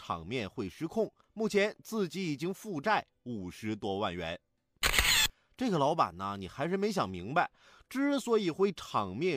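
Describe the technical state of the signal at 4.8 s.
At 4.8 s the speech signal is intact, with no audible fault at that moment.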